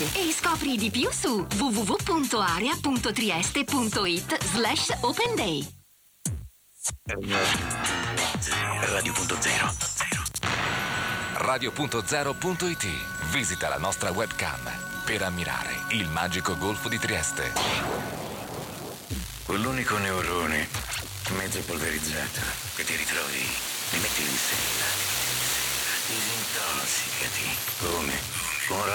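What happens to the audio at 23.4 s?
A disc scratch destroys more data than the player's error correction can rebuild, once each revolution, so the player patches or mutes those samples. From 23.15 to 24.19 s this produces CD scratch ticks: seven brief clicks, the longest about 4 ms, roughly seven per second.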